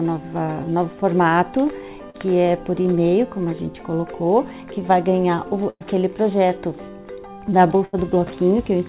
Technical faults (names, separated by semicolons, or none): short concealed packet loss; burst of packet loss